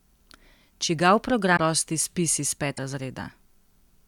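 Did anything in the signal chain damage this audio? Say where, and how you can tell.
Yes, codec stage, likely a broken MP3 bit reservoir: speech jumps ahead with brief garbage at 1.56–1.60 s before "prosti spis iz" and 2.76–2.79 s after it, as frames borrow missing data.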